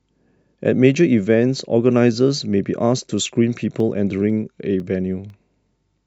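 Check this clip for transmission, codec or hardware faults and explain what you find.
One hardware fault is present. From 3.80 to 5.80 s, periodic USB or driver dropouts blank a fraction of a millisecond to silence every 0.5 s, heard as evenly spaced ticks, unlike random codec clicks.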